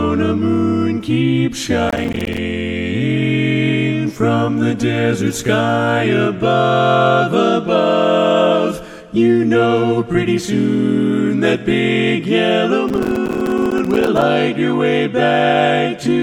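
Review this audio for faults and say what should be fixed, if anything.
Processor overload crackle at 1.89–2.37 s and again at 12.89–14.22 s: the processor repeatedly misses buffer deadlines, and dozens of tiny silent gaps with hard edges, which fits buffers around 5 ms, merge into gritty crackle. Prevent it with a larger buffer or a lighter processing load.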